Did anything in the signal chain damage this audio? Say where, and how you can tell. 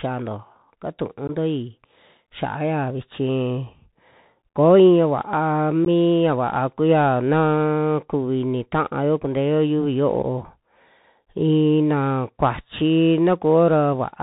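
Yes. At the codec stage, Bluetooth CVSD headset codec damage runs throughout: nothing above 4 kHz, scratchy sibilants, and granular hiss from one-bit delta steps, which fits a 64 kbps link.

On the wireless link, unconcealed Bluetooth headset packet loss leaves abrupt holes at 1.28–1.30 s, 5.85–5.87 s before "mi ya", and 10.23–10.25 s after "taayo kunteo yiuvi": one or two lost packets each.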